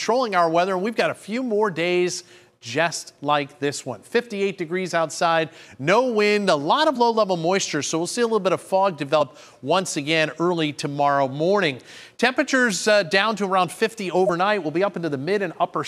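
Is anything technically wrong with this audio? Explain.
Yes. Brief skips at 6.95 s, 9.20 s and 14.26–14.30 s come from compressed frames being skipped. Whole frames went missing or were rejected as damaged, so playback jumps ahead about 20 ms, 50 ms and 20 ms.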